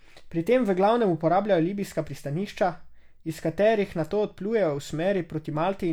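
No technical faults can be heard anywhere in the recording.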